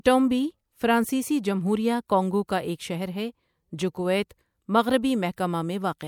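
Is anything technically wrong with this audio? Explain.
Yes, there's pre-echo at about 5.36 s: the codec smeared its block noise ahead of a sharp attack, so roughly 15 ms of hiss leads in and softens it.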